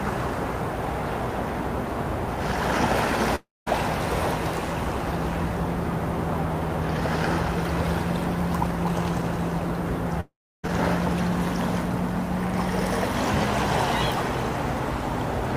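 At 3.35 s the sound smears into a fading buzz, then drops to about 200 ms of silence before resuming at 3.68 s, with roughly 300 ms of material gone. At 10.20 s the same thing happens over a longer span, with about 320 ms of silence and some 440 ms lost before audio returns at 10.65 s. Both are likely a long network dropout, where the receiver stretched the last sound until it ran out, then skipped ahead.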